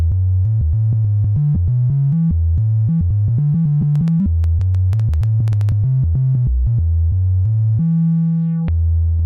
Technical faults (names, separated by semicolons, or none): skip ahead; jitter buffer speed-up; train of clicks